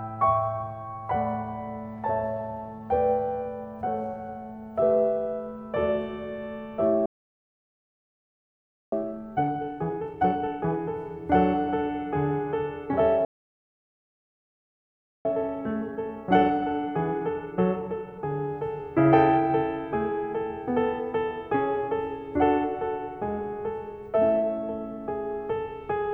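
At 7.06 s the music cuts out for about 1.9 s. This is a playback stall, likely caused by the player running out of data or its thread being blocked. The waveform drops to a flat line, and the spectrogram shows an empty vertical band.

From 8.92 to 10.78 s, time-compressed catch-up plays the backlog at 2× speed. It sounds hurried but stays at normal pitch. On the spectrogram the events are packed closer together while the harmonic spacing stays the same.

A second stall of 2.0 s runs from 13.25 to 15.25 s, likely caused by the same starved or blocked player. It shows again as a flat, silent gap.

Catch-up follows from 15.25 to 18.25 s at 1.25×. This is a gentler rush, with small cross-fade seams in the waveform.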